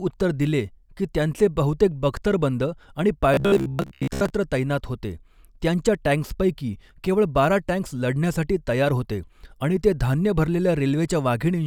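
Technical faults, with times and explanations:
3.34–4.30 s, robotic sound from repeated short buffers: between "बख्तरबंद आणि" and "तैनात होते त्यांच्या टॅंक्सपैकी", fresh audio likely arrived too seldom, so a 15 ms stretch was looped in place of most of the real signal, imposing a rigid, metallic 66.8 Hz buzz on the speech.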